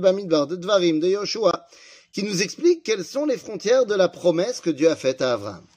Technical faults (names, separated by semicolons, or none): corrupt frame muted